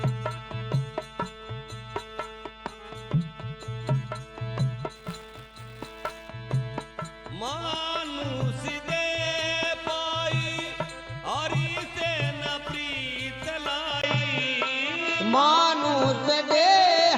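From 4.95 to 6.29 s there is buffer tearing. Writer and reader have slipped, so a small slice of each buffer replays older audio, causing a 200 Hz robotic buzz.

At 14.02 s a 20 ms gap occurs. From there to the end the band narrows, the level shifts by about 5 dB, and new noise sits about 40 dB down. This is likely an input switched to a poorer device.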